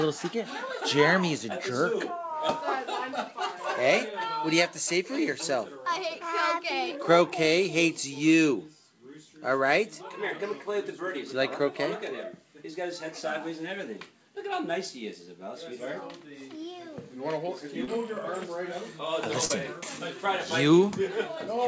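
At 17.84 s and again at 19.45 s, short concealed packet loss: about 40 ms of audio arrived too late, and the receiver extrapolated the previous sound before crossfading back, giving a brief smeared wobble. On a spectrogram, harmonics flatten and repeat; the waveform shows a looped patch. Nothing appears above 8 kHz, as the call codec allows.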